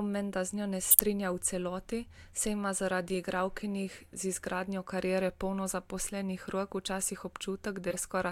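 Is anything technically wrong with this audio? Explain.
Yes, there are two spots where a corrupt frame got decoded. At 0.91 to 0.99 s and again at 7.91 to 7.97 s, flipped bits in compressed frames were played anyway. The misread gains and codes throw energy into the wrong frequencies, so you hear a short squeaky burst. The first is fairly loud and the second much quieter.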